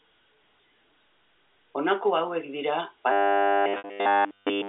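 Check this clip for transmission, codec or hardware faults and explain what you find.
Two faults are audible, both in the last second and a half of this speech clip, which comes over a G.711 telephone line limited to roughly 300 Hz to 3.6 kHz.

From 3.12 s to the end, just after "hauek dira", the sound turns robotic, from repeated short buffers. It becomes a rigid metallic buzz at 100 Hz. That points to a 10 ms buffer being replayed. Audio likely arrives too seldom, and essentially all of it is filled by repeats.

At 3.78 to 3.84 s there is packet loss with pitch repetition. About 60 ms of audio goes missing. The receiver repeats the last pitch period to bridge it. The gap outlasts the fade, so the sound dies to silence, then returns through a brief cross-fade.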